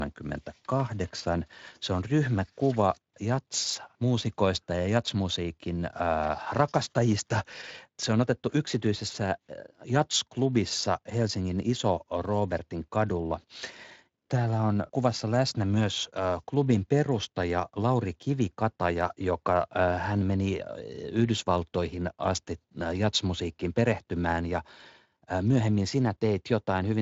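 Speech here, carrying clock slip clicks from 0.11 s right through to 26.94 s: a faint, steady ticking about every tenth of a second, a few hundred in all, loudest under sustained voiced sound. It sounds like single samples getting dropped or doubled at a fixed rhythm, most likely two devices running on their own clocks with nothing tying them together, drifting apart by a couple of hundred ppm. It rides on top of a light Speex coding layer with nothing above 7.6 kHz.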